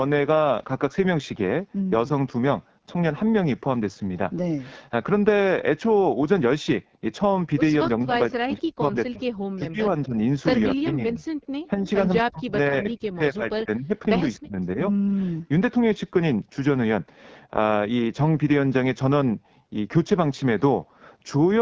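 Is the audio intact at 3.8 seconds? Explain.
No. At 3.8 seconds, like the whole clip, the speech has the rough, raspy texture of the AMR wideband (HD Voice) codec, which fits its low 8.85 kbit/s mode.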